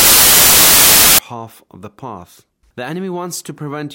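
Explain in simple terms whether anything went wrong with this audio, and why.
For the first 1.19 seconds, the sound is buried under a loud hiss like static. This is samples built from the wrong bytes: the player misread each sample's pieces, so tiny fine details became huge jumps.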